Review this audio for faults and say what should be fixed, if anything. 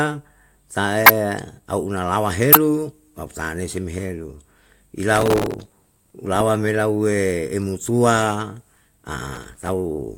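Corrupt frame decoded at 1.03 to 1.10 s, just before "au unalawa", and at 2.52 to 2.57 s, between "au unalawa" and "tau tanei si helu". Damaged compressed frames were played anyway. Misread data puts energy at wrong frequencies, giving brief chirps, squeaks, blips or bursts of noise. Add error checking so bad frames are concealed, not decoded.

Processor overload crackle at 5.15 to 6.14 s and 9.35 to 9.68 s. The processor missed many buffer deadlines in a row. Each miss repeats old audio with hard edges. This fits buffers of about 3 ms. The result is a burst of crackle or gritty tearing. Reduce processing load or use larger buffers.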